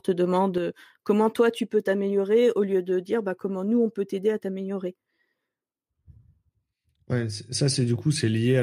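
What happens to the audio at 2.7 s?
At 2.7 s the speech sits about 6 dB quieter than at the start, a drop that begins at 0.58 s and lasts to the end, likely because one channel drops out.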